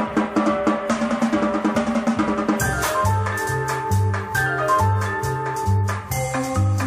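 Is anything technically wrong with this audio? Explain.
No, nothing in the signal stands out as technically wrong, with no audible faults anywhere in the recording.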